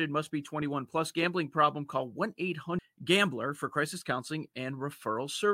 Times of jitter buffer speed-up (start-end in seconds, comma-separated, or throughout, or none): none